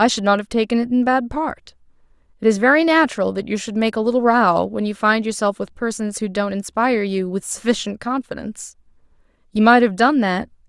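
No technical faults can be heard anywhere in the speech.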